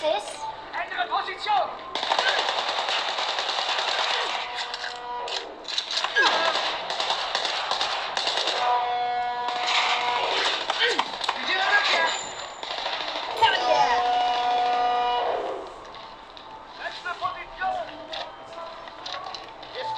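From 13.31 s to the end, periodic clock jitter at around 1 kHz adds sidebands either side of each component, giving a rough, metallic edge that fades in silences.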